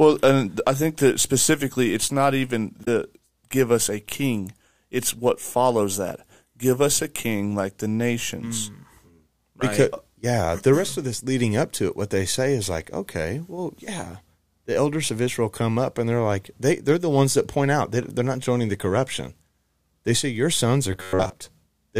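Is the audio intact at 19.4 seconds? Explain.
Yes, at 19.4 seconds the audio is intact, with no dropout, glitch or other fault audible at that moment.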